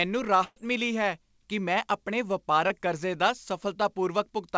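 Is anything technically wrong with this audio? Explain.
Yes, the speech has two packet-loss faults.

From 0.44 to 0.58 s, just before "ਮਿਲੀ ਹੈ ਕਿ ਮੈਂ", a burst of packet loss left about 120 ms undelivered. The receiver stretched the last sound across roughly 122 ms, fading it, with about 30 ms of silence, so a fading continuation of the last sound replaces the missing stretch.

At 2.68 to 2.72 s, right after "ਹੈ ਕਿ ਮੈਂ ਆਪਣੀ", a short concealed packet loss dropped about 20 ms. The decoder patched roughly 17 ms by extrapolating the preceding sound and blending back, leaving a brief smear.

Through the WebRTC call path, nothing is heard above 8 kHz, which fits G.722 at 64 kbps.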